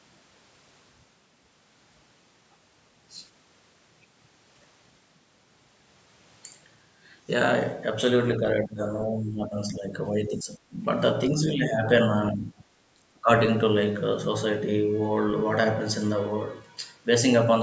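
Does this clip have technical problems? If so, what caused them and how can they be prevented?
Yes. Speech is suppressed in double talk, likely because an echo canceller mistook overlapping talk for echo. The speech dips or cuts out at 8.62–8.82, 9.07–9.92, 10.1–10.77, 11.31–11.85, 12.31–12.63 and 12.94–13.29 s, by up to roughly 20 dB. A headset, or a canceller with better double-talk detection, would prevent it.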